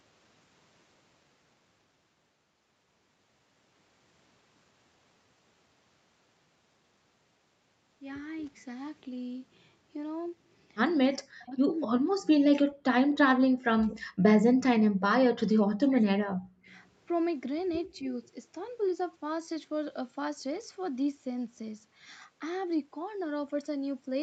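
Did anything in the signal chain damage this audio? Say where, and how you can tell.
Yes. The speech dips by roughly 40 dB at 11.23–12.85, 13.07–14.40, 14.56–14.64 and 14.96–16.73 s, with a shallow dip at 17.92–18.12 s. This is likely speech suppressed in double talk by the call's echo canceller.

Faint scraps, about 35 to 40 dB down and delayed 265 ms, appear at 17.87–17.98 and 18.25–18.29 s. This is likely echo leak, where loudspeaker pickup slipped past cancellation.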